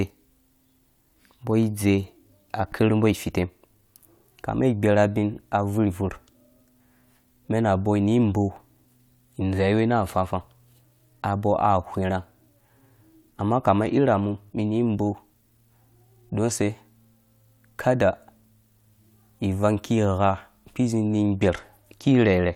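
Speech that twice turns dull and gritty, from 13.30 to 14.61 s and again from 21.01 s to the end: the treble falls away and a coarse, grainy noise rides on the sound, then clears after the first event. This is a Bluetooth SBC bit pool drop. The link got congested and the bit pool was cut, which fits a fall from 31 to 14, or roughly 99 kbps. The top sub-bands starve and the rest are quantised coarsely.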